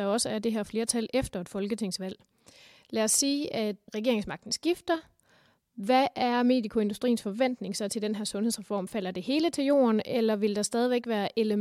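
No technical faults can be heard anywhere in this speech recording.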